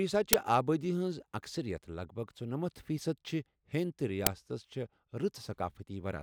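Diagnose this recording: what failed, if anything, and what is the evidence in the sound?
Two short, harsh cracks cut through the speech, one at 0.33 s just before "آبادی ہنز اكثرِیت" and one at 4.27 s just after "چھِ ہیندِ تہٕ". This is an uninitialised buffer at the driver or buffer stage: 10 ms and 5 ms blocks were played before audio was written, so leftover memory came out as sound.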